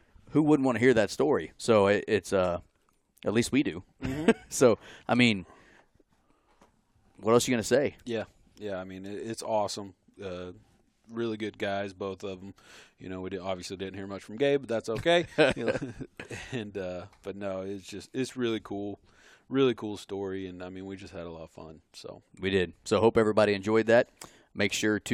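No technical faults can be heard anywhere in this recording.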